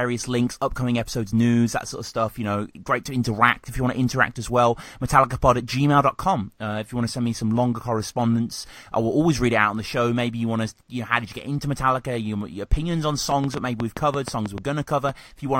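Likely interference from nearby equipment or a faulty connection or power supply injects a train of clicks from 13.32 to 15.10 s: about ten similar pulses at an uneven pace of roughly 5.6 per second, standing well above the speech and heard as ticking over it and in pauses.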